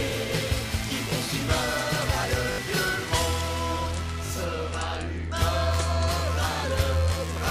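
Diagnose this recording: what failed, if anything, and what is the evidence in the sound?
The fault is a repeated buffer at the driver or buffer stage. At 1.10 to 1.12 s one short piece plays one extra time, at 2.52 to 2.58 s it repeats three times, and at 4.26 to 4.30 s twice. Each is a brief buzzy stutter with hard joins, repeating every 20 ms, which fits a 20 ms buffer replayed when fresh data arrived late. Network loss concealment would instead smooth and fade its stand-in audio. Roughly 20 to 70 ms of new audio is lost each time.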